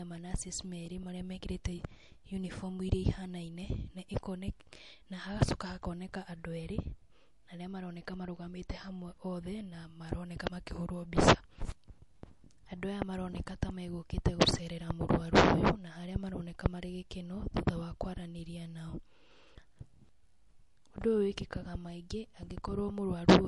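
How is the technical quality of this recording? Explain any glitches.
The recording's technical quality is held back by plainly audible compression damage throughout.

From start to finish the speech has MP3 compression artefacts: a watery, swirly texture, metallic chirps on s sounds and smeared attacks. This likely comes from a starved encode, consistent with about 48 kbps, that drops weak frequency lines frame by frame. A spectrogram shows a hard ceiling at 11.3 kHz with flickering gaps below.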